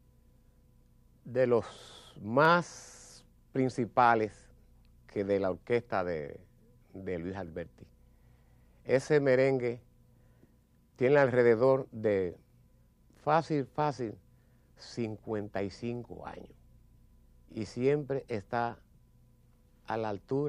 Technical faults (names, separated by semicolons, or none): overlapping chunks